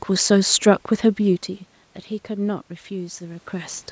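From 2.26 to 3.89 s, automatic gain rising is heard. The input drops about 14 dB. Gain climbs about 4 dB, lifting voice and room noise together.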